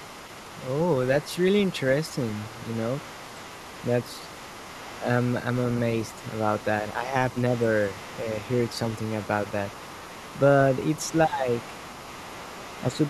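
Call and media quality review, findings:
Other side's voice leaking through: second voice audible under the talker for the whole clip, faint, roughly 20 dB below the speech. Likely incomplete echo cancellation on the talker's device. Far-end audio from the loudspeaker reaches the microphone, and the residual survives the canceller and gets sent back as a background voice.

Speech suppressed in double talk: brief dips in the talker's level at 4.99–5.09 s, 6.82–7.15 s, 11.26–11.47 s and 12.87–13.02 s, each a tenth to a fifth of a second. Deepest at 11.26 s, around 15 dB; about 10 dB at 4.99 s and 12.87 s; shallow, around 5 dB, at 6.82 s. Likely the echo suppressor attenuating during overlap, unable to tell near-end speech from loudspeaker echo and ducking both.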